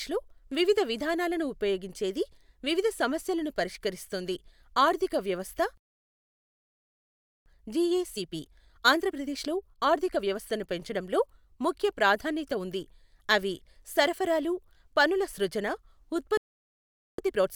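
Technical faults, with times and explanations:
5.77–7.46 s, playback stall: the speech cuts to silence for about 1.68 s mid-flow, likely a starved or blocked player, then resumes.
7.46–10.46 s, time-compressed catch-up: the speech runs about 1.15 times faster at unchanged pitch, as small pieces are cut and cross-faded to clear the backlog.
16.37–17.18 s, playback stall: the sound drops out for about 0.81 s, then picks up again.
17.18–17.55 s, time-compressed catch-up: the speech is hurried to about 1.25 times speed without any rise in pitch, unlike a sped-up tape, until the clip ends.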